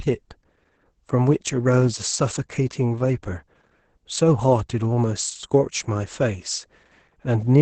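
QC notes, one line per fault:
Throughout: Opus voice compression, heavy, in SILK-only wideband mode at a rate that sounds near 10 kbps. Nothing sits above about 8.6 kHz, leaving the speech muffled, and the coarsely coded excitation adds hoarse, faintly robotic grain. The hard band edge plus buzzy texture distinguish it from simple low-pass filtering.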